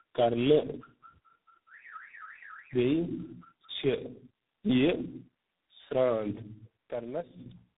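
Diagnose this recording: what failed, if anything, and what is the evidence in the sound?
Tandem speech coding at the codec stage: the whole clip sounds rough and warbly, with nothing above about 3.8 kHz. That fits roughly three speech coders in a row, each re-coding the last one's damage.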